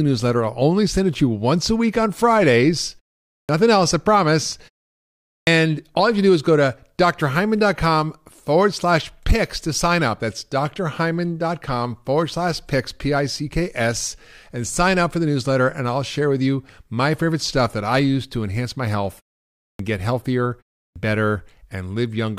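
At 3.38, 5.37, 19.69 and 20.84 s, speech resumes with a clipped start after a pause. Each time, the output path has gone idle during a pause of 0.3 to 0.76 s and needs about 100 to 120 ms to wake again, so the opening sounds are lost and the speech snaps in abruptly. On a waveform, full-amplitude speech rises straight out of flat silence with no onset ramp. A spectrogram shows a hard vertical edge where the speech begins.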